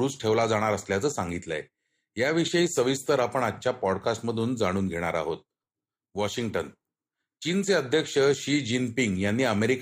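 No technical faults can be heard in this recording.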